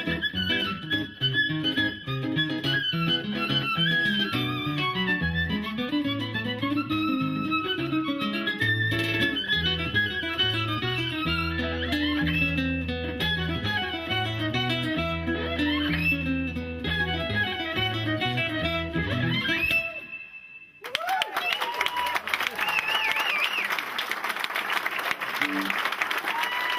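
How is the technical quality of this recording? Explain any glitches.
The technical quality holds up, with no glitches to explain.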